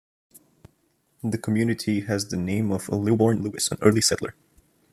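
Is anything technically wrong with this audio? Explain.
Yes. A time-stretched section runs from 3.05 s to the end of the speech clip. Software likely squeezed this stretch to fit a shorter length, dropping short pieces to keep pitch intact, so delivery suddenly runs about 1.79 times faster and sounds rushed at unchanged pitch.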